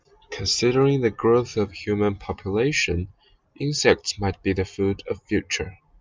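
Speech recording, no technical faults detected anywhere in the clip.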